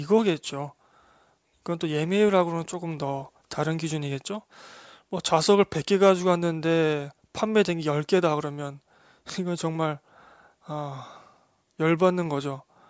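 Spoken audio, with no technical faults to report.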